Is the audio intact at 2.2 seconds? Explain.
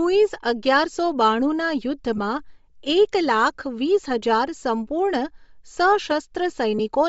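No. From 2.17 to 2.19 s the sound briefly turns into a grainy, noisy smear. These are lost LE Audio frames. About 15 ms of signal went missing, which fits two 7.5 ms frames. The decoder filled the gap by repeating the last spectrum with randomised signs, so the smear replaces the real sound. Around that moment the speech also has a breathy, grainy upper edge, likely from Bluetooth LC3 compression at a low bitrate, which zeroes much of the treble and fills it with noise.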